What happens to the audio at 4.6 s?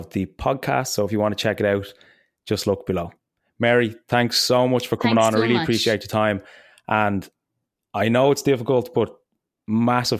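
Nothing goes wrong at 4.6 s: the speech carries straight through that moment with no dropout, click, distortion or other fault.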